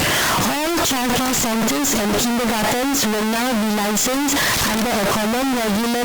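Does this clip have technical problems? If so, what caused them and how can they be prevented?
Yes. A stuck bit runs through the whole speech clip. Harsh, buzzy distortion sits on the sound, and the pauses fill with loud noise, since one high-order bit, worth roughly -10 dBFS, never changes and flips with the sign of quiet samples. The likely cause is a broken data line or faulty converter. Checking the converter and its wiring with a low-level test tone before recording would prevent it.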